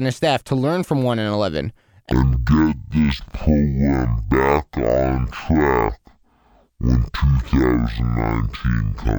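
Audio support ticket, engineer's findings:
Stereo read as mono, 2.12 s to end of clip. Speech abruptly drops to half speed and an octave low (pitch down 12 semitones). Probable component: capture or decode path misreporting channel count. Mechanism: interleaved left/right samples consumed sequentially as one channel, so each stereo frame becomes two mono samples, doubling duration and halving pitch; fainter mirrored image of the speech spectrum audible in the upper half of the band.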